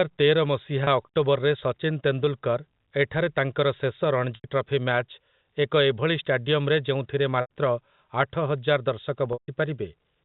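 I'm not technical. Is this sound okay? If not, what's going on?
No. Four brief dropouts from packet loss with pitch repetition, at 0.84, 4.35 (after "ଏଠାରେ ତାଙ୍କର ଶେଷ"), 7.41 and 9.33 s (after "ଆଠହଜାର ଦର୍ଶକ"). Missing bits of speech, up to 150 ms long, get patched by repeating the last sound, so a short gap briefly holds and buzzes, and the longer ones fade into silence.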